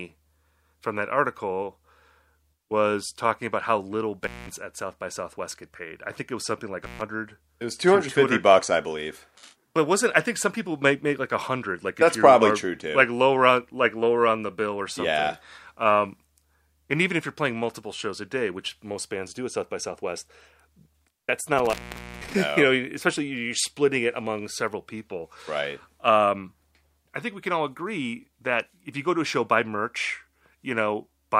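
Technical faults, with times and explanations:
4.24–4.49 s, 6.84–7.01 s and 21.58–22.34 s, intermittent contact: a loose plug or cable connection opens briefly, after "talking about how little" (resuming at "at south by southwest"), after "it was something like" and after "that's not". The signal drops out for about 193 ms, 135 ms and 486 ms. Crackle marks each break and restoration, with faint hiss in between. On a spectrogram, each dropout is a near-empty band framed by thin vertical broadband streaks. The waveform goes almost flat, with sharp spikes at the edges.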